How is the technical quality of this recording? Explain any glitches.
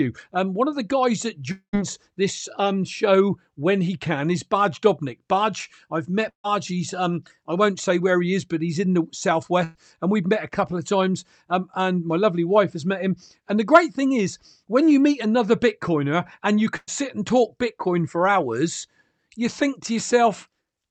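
Four gaps interrupt the speech. At each one, audio stopped arriving and the receiver filled the hole with an imitation of the last sound. The high end stops at 8 kHz, consistent with the Opus call path running at a setting like 48 kbps.

From 1.51 to 1.75 s the sound becomes a held buzz or hiss that fades, then drops to about 100 ms of silence. The likely cause is a long network dropout, which removed about 220 ms of audio.

At 6.29–6.46 s, 9.64–9.77 s and 16.77–16.89 s there are bursts of packet loss. At each, the receiver stretched the last sound and faded it over 100 to 150 ms, then skipped past the lost audio. The 6.29 s and 16.77 s gaps fade all the way to silence.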